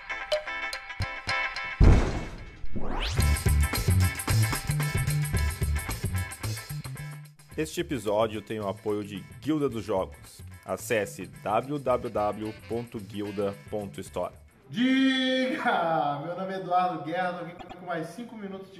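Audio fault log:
17.57–17.78 s: repeated frames. A block of roughly 105 ms, which fits a run of about four compressed frames, plays twice more, adding 209 ms as an identical stutter. Unlike a dropout or concealment, nothing goes missing; the same sound simply recurs.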